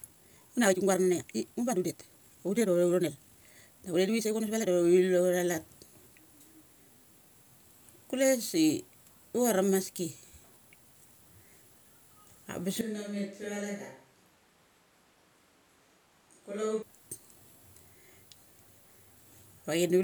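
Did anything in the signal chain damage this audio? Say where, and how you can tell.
Yes. From 0.00 to 4.72 s the speech runs about 1.79 times too fast yet keeps its normal pitch, sounding rushed. That points to a time-stretched section, likely from editing software dropping short slices to fit a length. A plain speed-up would raise the pitch too.

From 12.81 to 16.82 s the sound abruptly turns hollow and roomy, about 10 dB quieter, with thinner bass and room noise only around 30 dB below the speech. This is at the capture stage, likely a switch to a distant microphone. A simple gain drop wouldn't change the tone or add room.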